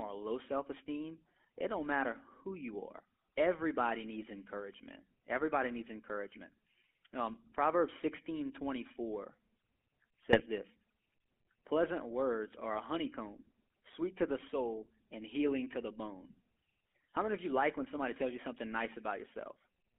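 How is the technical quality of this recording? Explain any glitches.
The quality is poor: the whole recording has passed through a narrowband mobile-phone codec, and two short stretches are damaged by transmission errors.

Throughout, the speech carries the buzzy, gravelly roughness of the GSM full-rate codec, which fits the 13 kbps full-rate coder. It rebuilds the voice from a vocal-tract model driven by a coarse, decimated pulse excitation, so the grain sits inside the voice itself. The band runs only from about 250 Hz to 3.4 kHz. Plain band-limiting would sound muffled but smooth, not rough like this.

GSM bit errors strike from 10.23 to 10.41 s and again from 16.30 to 16.35 s, just after "and healing to the". Corrupted filter, pitch or gain values make individual frames squawk, pop or gargle. Packet loss would cause gaps or repeats instead of these distorted bursts.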